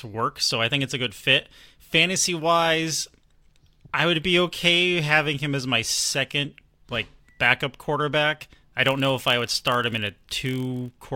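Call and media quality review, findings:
Buzz at about 43 Hz, 8.82–10.97 s, after "like backup quarterback I". Block size mismatch (padded): short writes zero-filled into reads that fit 1024-sample blocks; speed 0.999×, timbre intact.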